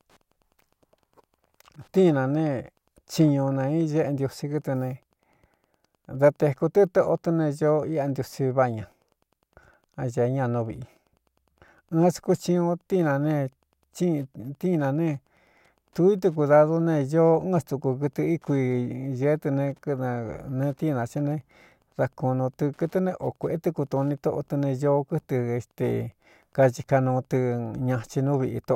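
Running under the speech from start to finish there's Wi-Fi interference: a nearby radio's beacon, repeating every 102.4 ms, gets rectified by the audio circuitry, so you hear a steady tick roughly ten times a second, sitting quietly at around 45 dB below the signal.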